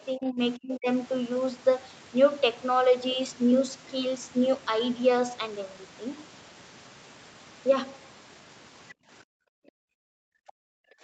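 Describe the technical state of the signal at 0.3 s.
At 0.3 s the speech is pulled down, most likely by speech suppressed in double talk. From 0.12 to 0.39 s the level sags by up to about 15 dB, as an echo canceller unable to tell the near talker from loudspeaker echo would attenuate both at once. It sounds like a brief ducking or choppy fade. On a waveform the envelope visibly pinches in. On a spectrogram the band up to 8 kHz dims and thins across that stretch.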